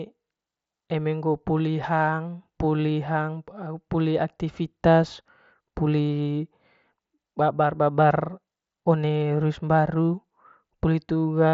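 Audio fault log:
No fault is present in the speech.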